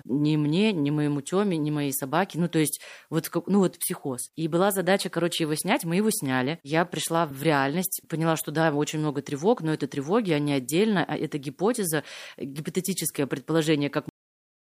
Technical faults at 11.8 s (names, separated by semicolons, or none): none